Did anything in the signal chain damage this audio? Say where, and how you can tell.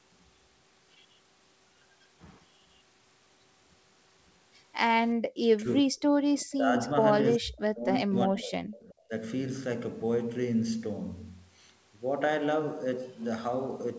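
Yes. The call's echo canceller likely ducked its own talker along with the loudspeaker echo: speech suppressed in double talk at 5.34–6.74 s and 7.38–9.12 s, dropping up to about 40 dB.

An echo leak, likely from a loudspeaker-side canceller leaving residue: at 6.41–6.55 s a faint copy, about 30 dB down, trails the speech by 377 ms.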